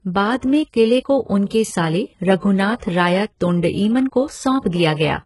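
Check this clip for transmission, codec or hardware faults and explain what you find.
There's one codec problem, running through the whole speech clip: heavy HE-AAC compression. Everything stops at 11.5 kHz, and the s sounds go gritty and metallic. That's likely treble rebuilt by band replication at a very low rate, around 12 kbps.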